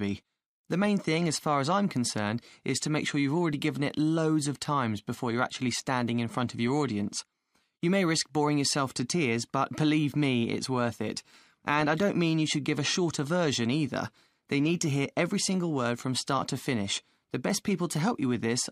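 No faults are audible anywhere in the clip.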